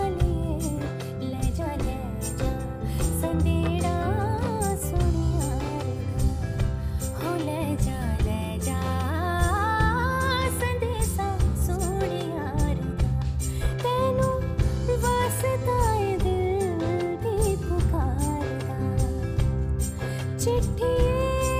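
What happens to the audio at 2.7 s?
Nothing goes wrong at 2.7 s; the audio there plays through intact, with no dropout, click, glitch or other audible fault.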